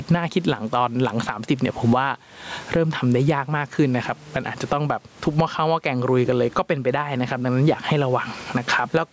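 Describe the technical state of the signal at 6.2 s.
Gain pumping is present at 6.2 s, as it is throughout the clip: the gain swings by around 20 dB, pulled down under every loud syllable, flattening the speech. The likely cause is excessive microphone gain driving a fast limiter or compressor.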